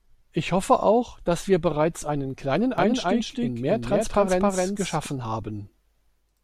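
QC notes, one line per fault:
2.78–5.06 s, doubled audio track: a slower second capture path or a misaligned edit has likely mixed in a full-band copy of the speech trailing by about 300 ms at roughly equal level, so every sound repeats dry, without decay, and the copy starts and stops abruptly.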